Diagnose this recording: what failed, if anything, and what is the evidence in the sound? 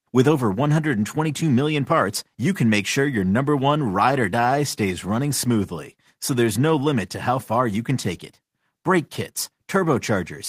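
Nothing in the speech stood out on listening as pointing to a failure at any stage of the chain.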